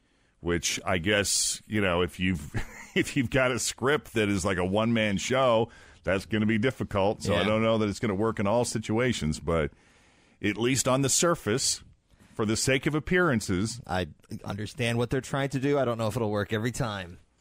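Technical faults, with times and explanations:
0.77–0.79 s, chunks out of order: one 10 ms chunk of audio was delivered one slot late and played after the chunk meant to follow it, so the two swap places. Nothing is lost, but three hard joins create a brief jumbled moment just before "I guess you know".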